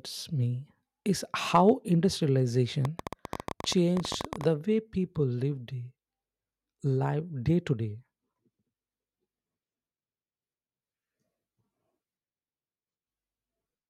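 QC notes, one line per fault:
1.55–1.70 s, hard clipping: just after "me is" the loudest peaks overran what the signal path could pass by about 3 dB and were sliced flat, so a brief rasp of crackle rides on those syllables. The squared-off tops create harmonics reaching well above the speech band. On the waveform the peaks sit as flat plateaus; on the spectrogram short vertical smears of high-frequency energy line up with each clipped peak.
2.85–4.45 s, train of clicks: a run of around twenty sharp ticks, about 14.5 per second at an uneven spacing, lands over the sound right before "way people lived", standing out at roughly 10 dB above the speech and audible in the gaps as well. Each click has much the same shape, which points to something outside the audio, likely interference from nearby equipment or a faulty connection or power supply. The spectrogram shows thin full-height vertical lines at irregular intervals; the waveform shows narrow spikes poking above the speech envelope.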